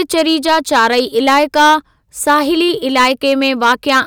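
Hard clipping runs through the whole of this speech clip, from start to finish. The signal is driven roughly 10 dB past what the stage carrying it can pass, so every peak is sheared off flat at the ceiling, and a few percent of the samples end up stuck there. Those squared-off tops add harmonics high up the spectrum, which is heard as a harsh, buzzy fuzz on the louder stretches of speech.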